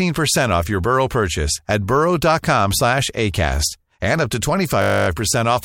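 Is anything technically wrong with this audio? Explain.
Yes. From 4.82 to 5.08 s there is a system hang loop: the driver stalled while the hardware kept replaying one 20 ms buffer, giving a steady 50 Hz buzz.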